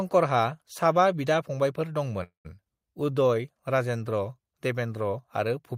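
A speech recording with three network playback faults clustered in the middle. At 2.23 s the audio halts in a call audio freeze lasting until 2.47 s. The last sound is carried on as a fading buzz that drops to silence for roughly 120 ms of the 213 ms gap. When the audio resumes, it picks up exactly where it stopped with nothing lost, so the pause adds 213 ms of delay. The likely cause is packets held up in transit, leaving the jitter buffer empty until they arrived.

Shortly afterwards, between 2.65 and 2.68 s, there is a skip ahead. Playback jumps forward over around 70 ms of audio, with only about 8 ms of fill bridging the join, so the two sides butt together almost directly and part of a sound is clipped out. That drop pulls the latency back down by roughly 50 ms, consistent with a stretch being discarded while later audio was already queued.

From 3.04 to 3.35 s a jitter buffer slow-down follows. 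The receiver repeats individual pitch periods to rebuild its reserve, adding 54 ms, so the speech runs at about 85% speed with unchanged pitch, and sounds in that span come out drawn-out.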